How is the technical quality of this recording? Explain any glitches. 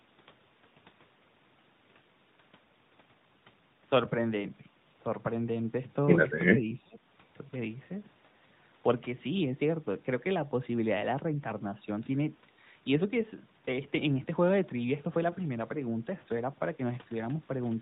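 The recording has three short glitches: one dropout from echo-canceller suppression and two brief frame losses, all heard through band-limited mobile speech that cuts off at 4 kHz and carries a light AMR-NB codec character consistent with its 12.2 kbps mode.

Speech suppressed in double talk, 6.52 to 7.06 s: The echo canceller most likely mistook overlapping talk for loudspeaker echo and clamped the near-end signal. The voice dips by up to about 25 dB, with the affected stretches totalling under half a second.

Lost AMR speech frames, 8.48 to 8.52 s and 12.04 to 12.08 s: Each time, a frame failed its check and the decoder filled the gap by repeating the previous pitch and vocal-tract settings at reduced gain. This produces a quick dip or warble of about 20 ms, which fits one lost frame.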